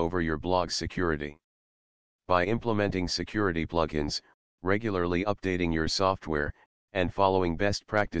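No technical faults can be heard anywhere in the clip.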